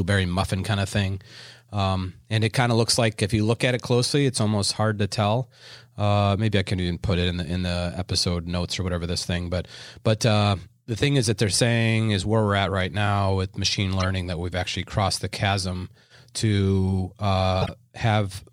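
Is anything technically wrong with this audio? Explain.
Yes. The speech contains two instances of corrupt frame decoded, at 14.00 to 14.09 s and 17.61 to 17.69 s, each lasting about 86 ms. In both, flipped bits in a few compressed frames were decoded as if valid, so misread gains and codes placed energy at wrong frequencies. The result is a brief chirpy, noisy blip unrelated to the speech, peaking around -15 dBFS in the first and louder, around -10 dBFS, in the second.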